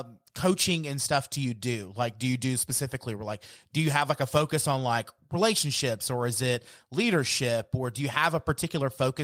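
Speech recording with no audible technical faults.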